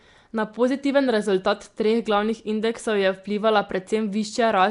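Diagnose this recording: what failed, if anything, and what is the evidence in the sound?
Codec stage: a rough, hissy halo and smeared, underwater quality throughout, nothing above 10.6 kHz, likely Nellymoser compression, starving weak bands and filling them with noise.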